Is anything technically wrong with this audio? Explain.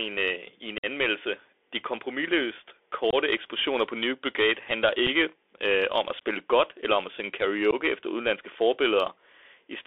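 Yes. Throughout, the speech carries Bluetooth CVSD headset codec damage. The band runs only from about 300 Hz to 3.5 kHz, which fits a 64 kbit/s CVSD link. Its one-bit, adaptive-step coding cannot track fast loud changes, so sibilants turn scratchy and a grainy hiss sits under the voice.

There are also four points of unconcealed Bluetooth headset packet loss, where lost voice packets were replaced by silence or an idle pattern. The first runs from 0.78 to 0.86 s, a 52.5 ms hole. The second runs from 3.11 to 3.15 s (22.5 ms), between "de kompromilløst" and "eksplosioner på". The third is a 7.5 ms dropout at 5.07 s, just before "øh om at spille". The fourth is 15 ms at 7.71 s, between "eller om at synge" and "efter udenlandske". Each gap has abrupt, click-prone edges, and the first spans several packets.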